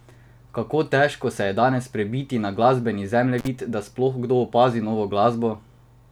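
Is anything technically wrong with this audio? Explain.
Yes, there's a brief intermittent contact fault in this speech, from about 3.38 to 3.48 s, right after "danes prebiti na glasbeni" and before "da sploh kdo opazi". It sounds like a loose cable or plug briefly losing its connection: the signal drops out for roughly 45 ms, with crackle as the contact breaks and again as it reconnects. While the line is open, faint hiss is left.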